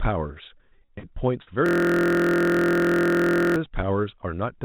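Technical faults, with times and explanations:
0.58–1.49 s, repeated packet loss (robotic sound): the speech breaks into a choppy run with eight short holes, the longest about 45 ms. Each missing stretch is covered by stretching out the sound just before it, so roughly a quarter of this span is synthetic fill. The holes come too close together for that patching to sound natural, which produces the robotic texture. All of it sits within the narrow, sub-4 kHz band of the G.711 call path.
1.66–3.56 s, system hang loop: a single 23.22 ms slice of audio repeats exactly, some 80 times in a row, producing a steady buzz at about 43 Hz instead of speech. This is what the sound card does when the computer or driver stalls: it keeps replaying whatever was left in its ring buffer. The loop length fits a 1024-sample buffer. Because the slice is so short, it is heard as a pitched drone rather than a stutter.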